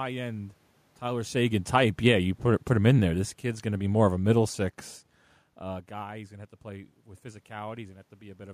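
From 1.34 s to 4.57 s there's automatic gain falling: the AGC judged the input too hot or its background noise too strong and eased its gain down by about 7 dB, so the speech sinks gradually and the room noise sinks right along with it, unlike the talker's own movement around 1 s.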